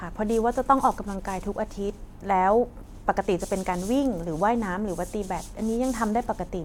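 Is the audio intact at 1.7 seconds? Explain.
Yes, at 1.7 seconds the speech plays through intact, with no dropout, click, distortion or other audible fault at that moment.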